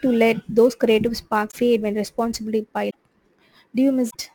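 Speech runs through the whole clip with a hiss and roughness from sample clock jitter. The converter's clock wanders by around 7 µs, so samples land slightly off time. The error sits roughly 30 dB below the signal and grows on loud, bright sounds. Three short glitches break the speech at 1.50 to 1.57 s, 2.89 to 2.95 s and 4.09 to 4.16 s. Each lasts about 60 ms and makes the sound jump ahead with a chirp, a noise burst or a short hole. The likely cause is a broken MP3 bit reservoir. Frames fitting a 24 ms size seem lost, and the following frames decode borrowed bytes from the wrong place.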